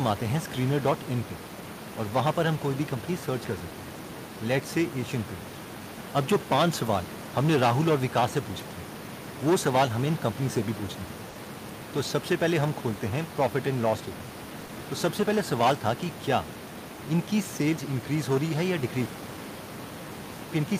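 At 11.29 s the speech hangs briefly. This is a short stall from a late packet. A packet arrived late, and the jitter buffer ran dry. The receiver held the last sound for about 60 ms until the data turned up. Playback then resumed from the same point, so nothing is lost. The held sound is stretched. The stall runs to 11.37 s, and everything after it sits about 60 ms later.

At 14.65 s there is a short concealed packet loss, lasting to 14.71 s. About 40 ms of audio never reached the decoder. The receiver filled the gap by continuing the previous sound, then blended back into the real signal. It sounds like a quick smear or small wobble in the speech. The filled span is about 40 ms long.

From 19.06 s to 20.53 s the speech drops sharply, by about 26 dB. Only a faint trace remains. This points to one channel inverted. The likely cause is reversed polarity on one stereo channel, so the centred speech cancels when the two are summed to mono. 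What survives is the small difference between the channels. The room noise, about 15 dB below the speech elsewhere, largely cancels along with it.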